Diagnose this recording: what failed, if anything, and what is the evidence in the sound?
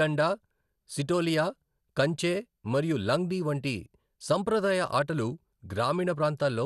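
Codec stage: the speech sounds dull and gurgly throughout, with nothing above 12.2 kHz, likely MP2 compression at a low bitrate, roughly 80 kbps.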